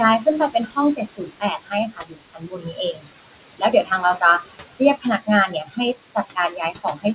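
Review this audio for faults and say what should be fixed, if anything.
Noise suppressor artifacts run through the whole recording. The suppressor pulls down every band it judges to be steady noise by about 21 dB, frame by frame, so the room noise sinks in the gaps and swells back up under the talking. On a spectrogram the background appears as patchy, flickering speckles between syllables rather than an even floor, and the waveform's noise floor pumps up and down. To prevent this, reduce the suppression depth or use a gentler, slower-tracking noise estimate.

Speech cut by the noise suppressor happens six times: 0.19 to 0.78 s, 0.95 to 3.11 s, 3.58 to 4.23 s, 5.01 to 5.28 s, 5.47 to 5.79 s, and 6.15 s to the end. The suppressor mistook quiet parts of the speech for noise and turned them down by about 18 to 22 dB, so soft consonants and word endings sound swallowed. The longest stretch, near 1 to 3 s, loses about one and a half seconds in total. 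On a spectrogram, faint fricative energy and syllable tails vanish abruptly, and the waveform shows clipped-off decays. To prevent this, give the suppressor a speech-presence safeguard so it never attenuates frames that contain voice.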